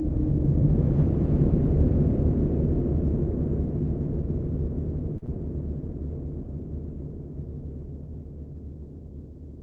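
At 5.17 s a packet arrived late and the jitter buffer ran dry, producing a short stall from a late packet that lasts until 5.39 s. The receiver held the last sound for about 48 ms while it waited, then picked up where it had stopped, so nothing is skipped. The audio ends up drawn out, leaving the stream about 48 ms later than before, with a faint buzzy hold or slight dip in level.

Inside that stall, around 5.26 to 5.29 s, a separate short concealed packet loss occurs: about 20 ms of audio never reached the decoder in time. The receiver patched roughly 13 ms of it by extending the preceding sound and blending back into the real signal, which comes across as a quick smear or wobble on top of the held stretch. Beneath both events runs the Opus call path, whose 8 kHz bandwidth caps the top end.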